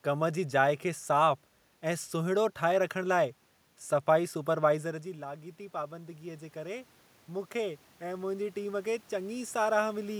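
From 4.82 s to 10.15 s there's automatic gain rising. Around four and a half seconds the talker drifts away from the mic and the level drops by about 13 dB, and the gain control responds by slowly pushing its gain up by about 9 dB over the rest of the clip. You hear it as a gradual swell, with the room noise creeping up right alongside the voice, since the gain lifts everything together.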